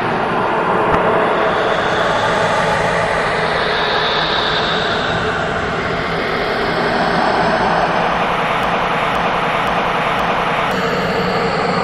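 An everyday-sounds recording with two faults. At 0.88 s a compressed frame arrived with flipped bits and the decoder played it anyway, and a few neighbouring frames were hit as well. The misread gains and codes pushed energy into frequencies that don't belong there, so from 0.88 to 0.96 s, for about the length of those damaged frames, a short glitch cuts across the sound. Later, a stall in the player or stream is the likely cause of a broken-record loop. The system held onto its last fragment and kept sending it. From 8.63 to 10.71 s a 0.52 s piece of audio plays four times back to back, identical each time, and whatever should have sounded during those two seconds never comes through.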